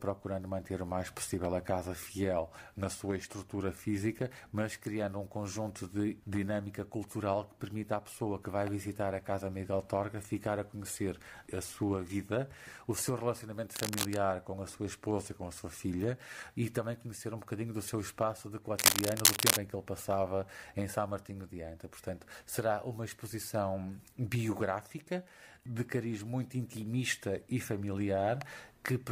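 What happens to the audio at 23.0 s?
Nothing goes wrong at 23.0 s; the audio plays through that moment intact, with no dropout, click, distortion or other fault.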